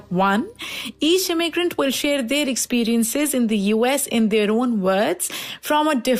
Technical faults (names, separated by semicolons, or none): none